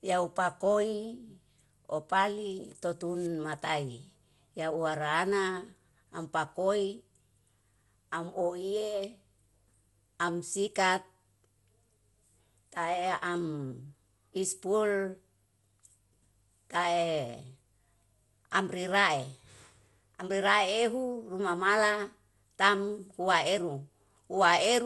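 From start to finish the speech sounds swirly, smeared and hollow, with blurred attacks and nothing above 11.9 kHz. This is generation loss, likely from around ten successive lossy encodes, each requantising on a shifted frame grid, consistent with MP2 at 96 kbit/s.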